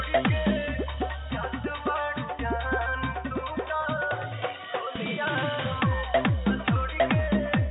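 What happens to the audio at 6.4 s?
Nothing goes wrong at 6.4 s; the audio plays through that moment intact.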